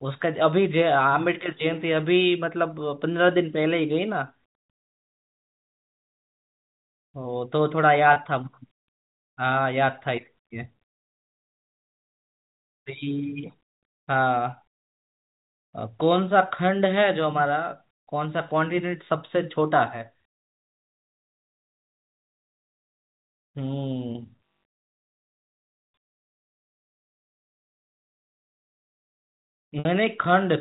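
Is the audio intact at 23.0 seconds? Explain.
Yes, the audio is intact at 23.0 seconds, with no dropout, click or other fault at that point.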